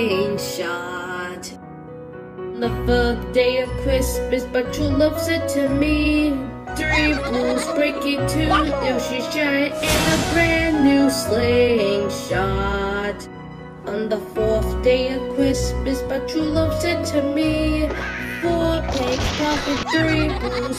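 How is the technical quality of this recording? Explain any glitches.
No glitches or technical faults can be heard anywhere in the recording, and the signal holds steady throughout.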